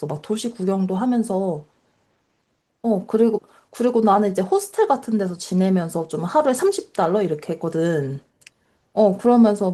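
No technical faults can be heard anywhere in this speech. The Opus voice compression leaves only light coding marks and keeps the full band, with a low layer and a separate layer above 8 kHz, which fits hybrid mode at around 24 kbps.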